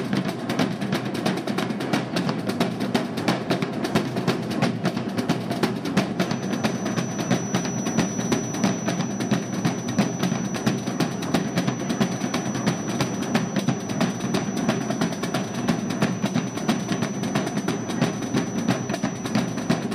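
Feedback whistle from 6.11 s to the end of the clip: a single steady tone at 5.9 kHz sits behind the sound, roughly 15 dB below it, and holds its pitch throughout. This is likely a loudspeaker-to-microphone loop running just short of full feedback. That 5.9 kHz component is reinforced each time round the loop and keeps ringing at a low level, but never gains enough to build into a howl.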